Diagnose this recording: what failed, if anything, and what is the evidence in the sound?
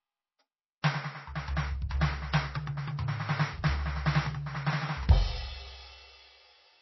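The music sounds dull and watery throughout, with nothing above about 5.8 kHz and a swirling, metallic texture where weaker detail drops in and out from frame to frame. The damage is at the codec stage, likely MP3 compression at a very low bitrate, roughly 24 kbps. Starved of bits, the encoder cut the treble at a fixed point and discarded quiet spectral lines, leaving a thin, unstable sound.

Two attacks are preceded by a short hiss that blurs their onset, first from 0.82 to 0.84 s over about 21 ms and again at 1.89 s over about 17 ms. This is pre-echo, also from the codec stage. The transform spread quantisation noise sized for each loud attack across its whole block, so the quiet moment just before the hit is filled with noise and the transient sounds smeared rather than crisp.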